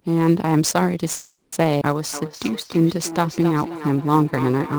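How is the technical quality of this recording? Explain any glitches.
The technical quality is poor. The speech carries a constant roughness, and there are five distinct faults packed into under five seconds: a stall, a jump, a slowed stretch and an echo that lasts to the end.

Sample clock jitter runs through the whole recording. The converter's clock wanders by around 10 microseconds, so each sample is taken a little early or late. Where the waveform changes fastest, that timing slip becomes an amplitude error, here roughly 25 dB below the signal. It comes across as a grainy hiss riding on louder and brighter speech sounds and disappearing in the pauses.

A call audio freeze runs from 1.15 to 1.54 s. Audio stops arriving for about 370 ms, likely because packets were delayed in transit and the receiver's buffer emptied. The receiver bridges the gap by extending the last sound into a fading tail. 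Nothing is lost: when the packets turn up, speech resumes exactly where it stopped, so the sentence is stretched by a 370 ms hold rather than cut.

A skip ahead occurs at 1.80 to 1.83 s. About 100 ms of speech is discarded, either in transit or because the buffer had overfilled, with later audio already queued. Only about 10 ms of fill joins the two edges, so the listener hears an abrupt forward jump: speech vanishes and the sounds on either side butt together almost seamlessly.

A jitter buffer slow-down runs from 2.28 to 3.15 s. The buffer, running low or having just raised its target delay, rebuilt its reserve by repeating single pitch periods and fragments of pauses, adding 111 ms in total. Speech in this stretch plays at 88 percent speed while the pitch stays unchanged. Vowels sound drawn out and the rhythm drags.

Feedback echo between two devices starts at 2.13 s and continues to the end. 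A second device in the same room is playing the call aloud, and its sound leaks back into the other microphone. Neither echo canceller removes it, because each only cancels its own playback. Speech returns after about 300 ms, reaching about 13 dB below the direct sound, thinner and more metallic with each pass.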